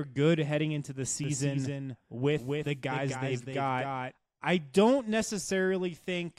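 From 1.24 s to 4.12 s the speech carries a doubled audio track. A second full-band copy trails about 300 ms behind, a few decibels quieter. It has no decay or room tone. It cuts in and out abruptly, likely from a slower duplicate capture path.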